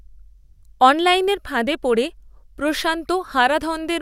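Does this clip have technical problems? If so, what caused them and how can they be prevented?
No, no technical problems detected.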